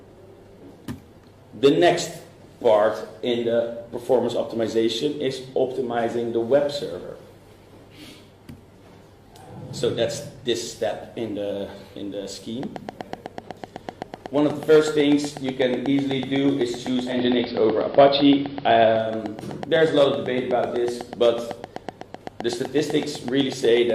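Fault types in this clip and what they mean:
Train of clicks: A steady train of near-identical pulses runs from 12.63 s to the end at 23.91 s, spaced regularly at about 8 per second, roughly a hundred in all. They peak around 10 dB above the programme, so the ticking sits clearly on top of the sound and persists through quieter moments. The regular pacing most likely points to interference from nearby equipment or a faulty connection or power supply.
Digital radio blending to analogue: Between 17.01 s and 19.14 s the receiver loses the digital stream and cross-fades, over about 233 ms each way, to the AM simulcast of the same station. During that stretch the bandwidth collapses, so the sound turns dull and narrow. Level shifts by about 3 dB and a hiss floor appears, roughly 30 dB below the signal, before the digital feed blends back in.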